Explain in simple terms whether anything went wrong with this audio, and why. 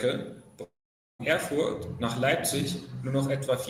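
From 0.63 to 1.21 s the speech drops out: the last sound stretches into a fading buzz, then there's almost half a second of near-silence, and the speech resumes with about half a second gone. That's likely a long network dropout.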